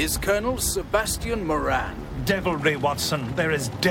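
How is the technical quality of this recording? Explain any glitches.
No glitches can be heard anywhere in the recording. There is nothing here that calls for an explanation.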